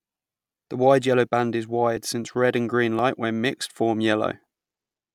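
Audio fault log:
1.97 s and 2.99 s, dropped buffer (overrun): the speech skips ahead a few milliseconds, with no silence. Likely the samples were overwritten before being read, so the audio on either side of the lost piece is joined directly.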